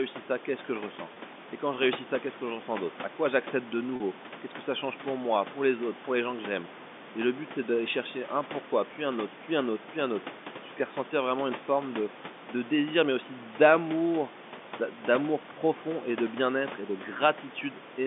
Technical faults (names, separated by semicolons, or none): packet loss with pitch repetition